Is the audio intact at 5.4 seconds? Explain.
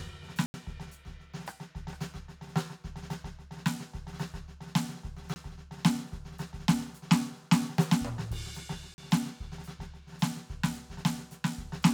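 No, not quite. A block of digital silence cuts the music from 5.34 to 5.36 s. For 20 ms the music drops out with no fade, leaving a short hole.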